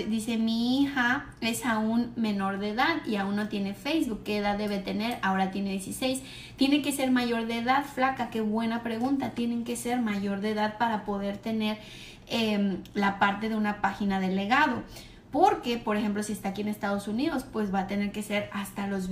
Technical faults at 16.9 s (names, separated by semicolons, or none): none